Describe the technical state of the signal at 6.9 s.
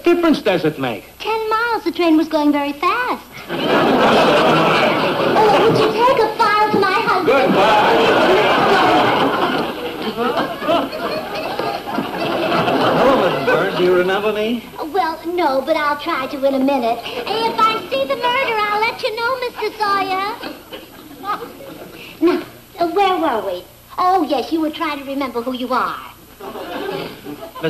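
At 6.9 s you're hearing hard clipping, and it isn't confined to that moment; it runs through the whole clip. The signal is driven roughly 6 dB past what the stage can pass, so the loudest peaks get sliced flat, around 2 percent of samples. Those squared-off tops throw harmonics way up the spectrum, so the louder moments pick up a gritty crackle rather than a clean edge.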